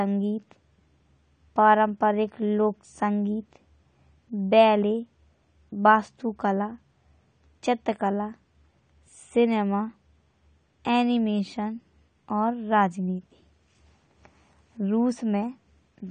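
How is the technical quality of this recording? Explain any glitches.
The quality is noticeably degraded by codec damage that runs through the whole recording. From start to finish the speech sounds dull and smeared, with a warbling, fizzy texture on sibilants and held sounds. The likely cause is AAC compression at a low rate, which fits roughly 32 kbps AAC-LC. The encoder quantises each frame's spectrum coarsely and discards the top end. On a spectrogram, energy stops abruptly at 9 kHz, with patchy holes and blotchy bands below that line. The waveform looks unremarkable.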